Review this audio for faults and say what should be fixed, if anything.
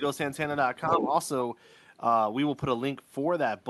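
From 0.86 to 1.08 s, the other side's voice leaks through, only a little quieter than the main speech, likely loudspeaker playback left in the microphone by incomplete echo cancellation. To prevent it, use a headset or retune the echo canceller so far-end playback is fully removed.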